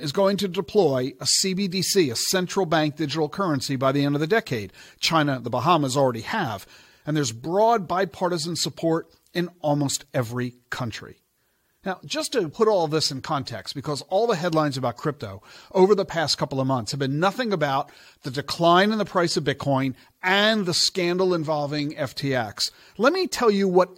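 No technical faults are audible.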